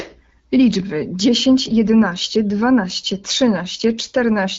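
Nothing stood out on listening to this speech, which comes across as a wideband HD Voice call at around 12.65 kbit/s.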